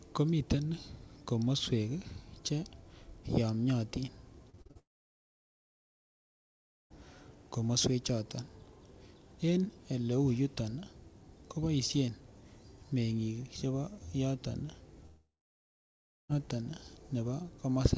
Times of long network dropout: 4.79-6.92, 15.06-16.35

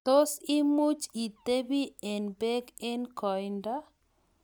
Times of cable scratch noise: none

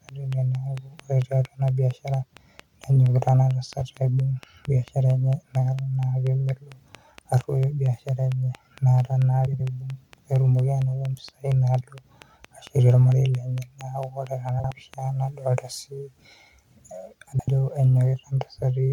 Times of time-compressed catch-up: none

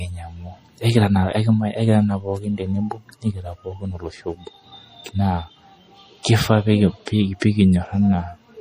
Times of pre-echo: 7.40

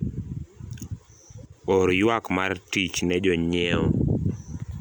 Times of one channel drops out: 1.46-1.52

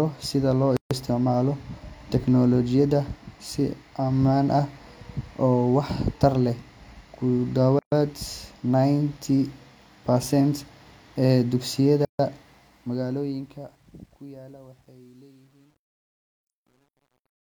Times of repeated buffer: none

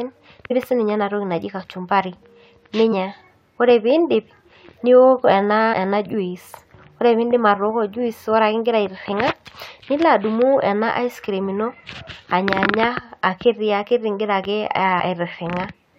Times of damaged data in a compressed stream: 0.50, 2.91, 5.72, 9.11, 14.99

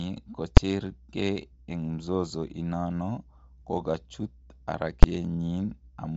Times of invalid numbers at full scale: 0.57, 5.03

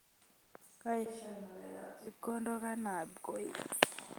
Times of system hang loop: none

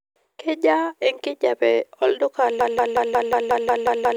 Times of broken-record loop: 2.61-4.17

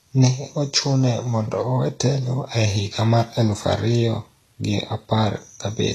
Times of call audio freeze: none

